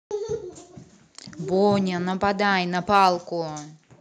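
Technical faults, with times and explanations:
2.94–3.08 s, microphone overload: the loudest bit of speech here turns harsh and crackly, with peaks pushing about 2 dB past the converter's limit and a couple of percent of samples flattened. The input gain was likely set too hot, so the converter chopped those tops off.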